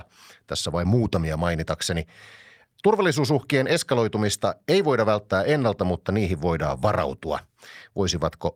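Right from the start there's clock drift between sender and receiver: the sending end's clock is running fast, something like 4 percent ahead of the receiver's. Samples arrive a little quicker than they're played out, so the jitter buffer keeps filling up. Since the receiver can't consume them at that rate, it has to shed audio to stay in step. You hear this as a faint unevenness in the speech rhythm across the whole clip rather than any one obvious glitch.

The fix for that shows up as repeated timing corrections from about 0.43 s to 8.48 s. Because the sender is fast, the receiver keeps trimming out short slices of audio, all in the same direction, netting out to playback running at roughly 104 percent. The cuts aren't evenly spaced, and each is tiny, so they come across as small hiccups and a slightly hurried, wobbly tempo.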